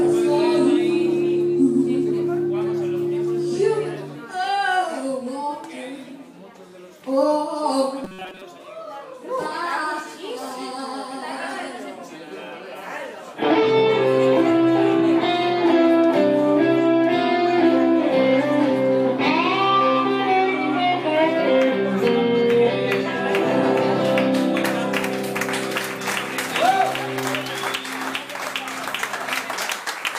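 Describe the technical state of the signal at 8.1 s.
At 8.1 s the signal sits inside a stretch of robotic sound from repeated short buffers, running from 8.04 to 8.42 s. The likely cause is new audio failing to arrive in time, so the playback chain fills the gaps by looping the last few milliseconds while the real audio is skipped. Most of that span is repeated material, and the loop imposes a rigid, metallic buzz near 188 Hz, which fits a block of roughly 5.3 ms being replayed.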